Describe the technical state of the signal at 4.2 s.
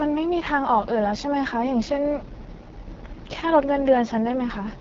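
The AMR wideband (HD Voice) codec damage runs through the whole clip, including 4.2 s. The speech is coded by a low-rate vocal tract model driven by sparse pulses, and the heavy rough, raspy quality fits the lowest 6.6 kbit/s mode. On a spectrogram, harmonics below 6.4 kHz look smeared and grainy, the band above is filled with diffuse noise instead of structure, and nothing appears above 7.6 kHz.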